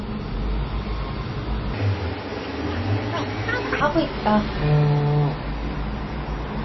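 From start to finish the audio carries the marks of heavy lossy coding, likely MP3 compression. Nothing survives above 5.8 kHz, so the top is dull and boxed in, and a watery, swirling texture rides on the remaining detail where weak frequency lines drop in and out between frames. The damage is plainly audible and fits a very low bitrate of around 24 kbps. On a spectrogram the content ends at a hard horizontal ceiling near 5.8 kHz, with patchy, flickering blocks below it.

From 1.74 to 3.80 s, a section at the wrong speed plays 1.98 times too fast, likely because it was run against the wrong clock. Speed and pitch rise together, so everything in that stretch turns hurried and chipmunk-like, about ten semitones higher, and drops back abruptly at 3.80 s. On a spectrogram the harmonics in that span jump up and spread apart, nearly doubling in frequency. The waveform shows its events packed tightly together in time.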